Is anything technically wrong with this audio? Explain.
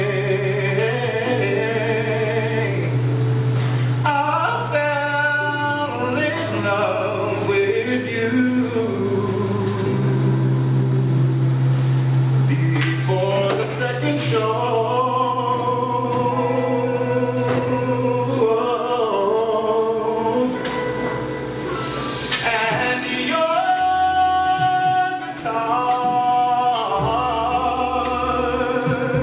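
Yes. Aliasing runs through the whole clip. The sound points to a drop from a 48 kHz rate to 8 kHz with no anti-alias filter first, so everything above the new 4 kHz limit folds back down as false, unrelated tones sitting roughly 20 dB under the real signal. High, hissy detail turns gritty and metallic. A spectrogram shows energy packed hard against a 4 kHz ceiling, with mirrored traces that don't follow the true harmonics.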